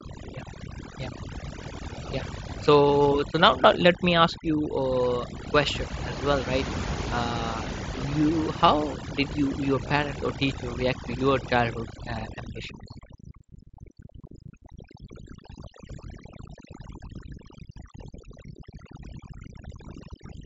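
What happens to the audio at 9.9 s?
At 9.89 s there's a brief concealed Bluetooth headset packet loss. About 15 ms of audio went missing between headset and phone, which points to a couple of dropped packets. The receiver patched the gap by repeating a closely matching slice of what came just before. Because this is a short run rather than a single loss, it comes through as a brief buzzy tone with a small warble as the real signal picks back up.

Underneath that moment, the overdone noise removal that runs through the whole clip is still at work. The suppression cuts individual frequency bands hard wherever they sit close to its noise estimate, so the background drops and breaks up into little twinkling specks.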